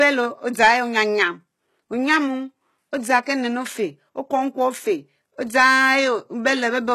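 All the way through, the speech carries what is likely HE-AAC compression, and it's plainly audible. The top end is still there, but it's synthesized: the upper band gets rebuilt from copies of the lower spectrum instead of being coded, so the harmonics don't line up and the s sounds come out gritty and a bit lispy. Nothing survives above 12.3 kHz, and the damage fits a low bitrate of around 16 kbps.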